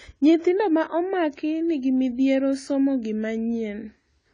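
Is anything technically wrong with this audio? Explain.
Yes. Throughout the speech, nothing sounds above 9.9 kHz, and the audio is audibly smeared and warbly, likely AAC compression at a rate fitting about 24 kbps. The warble, not just dullness, rules out a plain low-pass filter.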